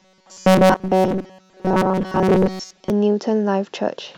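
From about 0.01 s to 2.90 s, audio likely arrived too seldom, so short chunks of roughly 5.3 ms were replayed for around 70 percent of that time. The result is robotic sound from repeated short buffers: a rigid, metallic 188 Hz buzz loosely tracking the speech.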